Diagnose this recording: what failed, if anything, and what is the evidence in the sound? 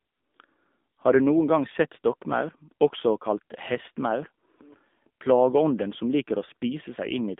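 The failure is at the codec stage: the whole clip went through the AMR narrowband mobile codec. The band is telephone-narrow, roughly 200 Hz to 3.6 kHz, and nothing gets past 3.7 kHz. The speech has a plainly audible buzzy, synthetic edge because the coder rebuilds it from a vocal-tract model fed with sparse pulses in 20 ms frames. That degree of damage points to one of the low AMR-NB modes, around 7.4 kbps.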